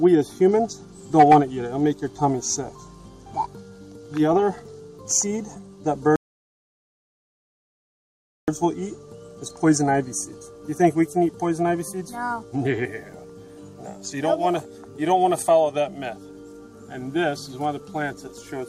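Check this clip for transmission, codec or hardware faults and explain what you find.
One transmission fault: a rebuffering stall from 6.16 to 8.48 s. Playback exhausted its downloaded audio and paused, adding 2.32 s of silence before resuming exactly where it stopped.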